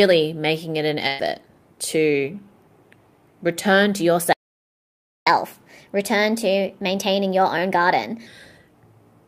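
At 1.07 to 1.21 s, just after "making it an", a burst of packet loss occurs. The last sound is stretched and faded over roughly 113 ms rather than dropping to silence. When the audio picks up again, about 120 ms of material has been skipped. The covered-over gap and the missing content distinguish it from a stall.

From 4.33 to 5.27 s, right after "return to", a playback stall leaves true silence for about 0.94 s. The player likely ran dry of buffered data or its thread was blocked. Unlike the loss burst, nothing is filled in during the gap.

From 5.27 to 8.27 s the catch-up at higher speed follows. The stalled backlog is resampled at 1.15 times normal speed, so the pace quickens and pitch lifts by about two semitones for three seconds before settling back. The pitch rise marks this as resampling rather than faster talking.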